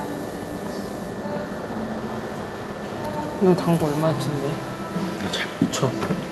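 Nothing goes wrong in this recording of everyday sounds; it just carries the ordinary character of an Opus call path, with the top end easing off around 12 kHz and the light coding texture you'd expect from that route.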